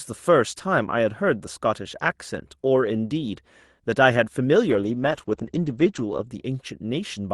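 From 4.7 to 6.33 s, a call bitrate drop starves the Opus encoder: speech turns coarse and watery, and bandwidth shrinks from 12 kHz to 8 kHz, fitting a fall from about 32 to 12 kbps. A spectrogram shows everything above 8 kHz vanishing for roughly 1.5 s.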